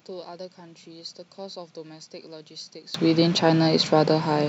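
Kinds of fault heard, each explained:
One channel inverted: for the first 2.94 seconds the speech drops by about 26 dB and goes faint, as if the centre got scooped out. That's likely one stereo side flipped in polarity, so the shared content cancels when the two sides are summed to mono.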